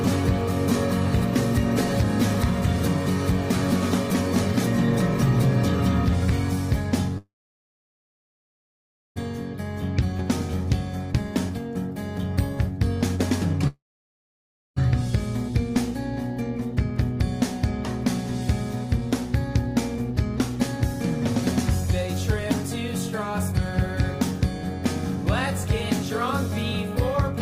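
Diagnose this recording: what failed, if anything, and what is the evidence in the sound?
Network and jitter buffer: call audio freeze. At 7.18 s the sound trails off in a brief fading continuation and then goes silent for about 1.9 s, resuming at 9.18 s. A second, shorter stall runs from 13.67 s to 14.78 s, with about 1.0 s of silence. In both cases playback picks up exactly where it stopped, with nothing lost. The likely cause is delayed packets leaving the jitter buffer empty. Each stall adds its full length to the playout delay.

Network and jitter buffer: skip ahead. At 10.18 s to 10.21 s the audio jumps forward over a splice of roughly 10 ms. About a second of material is simply absent, and the sound on either side is butted together almost directly. This is what happens when queued audio is discarded while later packets are already waiting. It removes roughly a second of the extra delay that the first freeze built up.

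Jitter buffer: speed-up. From 10.05 s to 16.90 s the audio runs about 3% fast at unchanged pitch, removing roughly 0.2 s in total. A milder pass from 19.01 s to 23.53 s runs about 1% fast and trims roughly 70 ms. The receiver is cutting out short pitch-period-length pieces repeatedly to drain a buffer that is holding more than its target after a stall.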